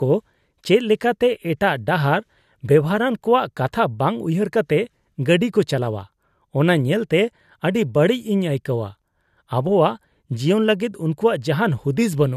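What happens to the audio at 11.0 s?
At 11.0 s the speech carries on intact, with no dropout, click, distortion or other fault at that point.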